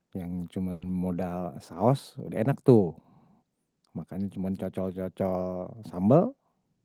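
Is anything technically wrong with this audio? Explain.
Yes, there is one fault in this speech clip. A burst of packet loss runs from 0.71 to 0.88 s. About 100 ms of sound was bridged by stretching the last received audio while fading it. About 80 ms of speech is then skipped, and the sound resumes slightly further along.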